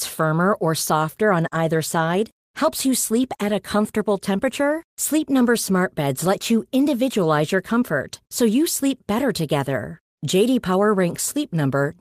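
No dropouts, clicks, distortion or level jumps are audible anywhere in the recording.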